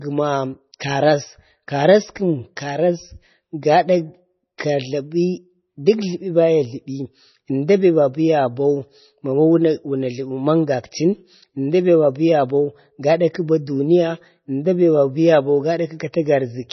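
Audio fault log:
Throughout: MP3 compression. The speech sounds watery and swirly, dull with nothing above 6 kHz, and sibilants turn metallic. The likely cause is heavy encoding, which fits a 24 kbps bitrate: the treble is cut off, and weak frequency lines starve and flicker between frames.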